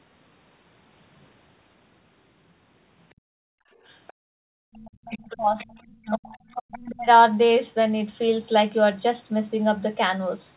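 From 3.15 to 3.77 s the room background is gated by the echo canceller. While the loudspeaker plays, the canceller clamps the microphone down by about 38 dB, so the room sound vanishes and then returns. It happens again from 4.13 to 4.73 s, this time by about 40 dB. On a spectrogram the faint background noise floor turns into near-black gaps. The waveform shows the low-level texture flattening almost to a line across those spans.

Between these gaps, from 3.86 to 4.13 s, a second, far-side voice leaks through, roughly 30 dB below the speech. It returns from 4.73 to 5.83 s at around 25 dB down and from 6.34 to 6.62 s at around 15 dB down. The likely cause is loudspeaker echo that the canceller failed to remove fully. It grows more noticeable with each return. On a spectrogram it appears as weak, broken harmonic traces separate from the main talker. Like everything else here, it is confined below 4 kHz by the telephone-band G.711 path.

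Speech is suppressed in double talk from 5.07 to 6.35 s and again from 6.68 to 7.08 s, with dips of roughly 35 to 40 dB. The likely cause is the canceller mistaking overlapping talk for echo and ducking both sides. The talker's voice fades, loses its upper range or breaks into pieces. The waveform envelope caves in during these stretches, and the spectrogram shows speech energy chopped into fragments.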